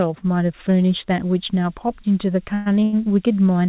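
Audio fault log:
1.21–3.68 s, switching supply whistle: a thin high whistle comes in and holds to the end, drifting between 4.2 and 4.35 kHz at about 25 dB below the sound. The pitch wanders rather than staying fixed, which points to a switching supply in burst mode or beating with another.
2.54–2.68 s, call audio freeze: the last sound is carried on for 117 ms as a fading buzz or hiss, never dropping to silence, and then the audio resumes exactly where it stopped. This is likely a jitter buffer running dry while packets were held up. Nothing is lost, only delayed, and the fill is long enough to hear as a fade rather than a brief smear.
2.80–2.84 s and 2.84–2.95 s, short stall from a late packet: two stalls back to back stretch the sound by 19 ms and then 88 ms, leaving a slight buzz or dip before it picks up in place. These are shorter than the freeze and never fade away, so they sound like a held, smeared sound rather than a fading tail. 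Nothing is missing, so they are not dropouts.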